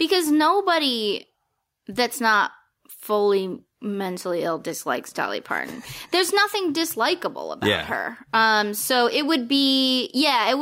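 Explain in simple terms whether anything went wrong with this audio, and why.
Gain pumping throughout: loud and soft parts end up closer in level and the speech sounds squashed, likely a limiter fighting way too much mic gain.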